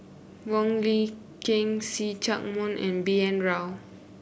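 No technical faults are audible.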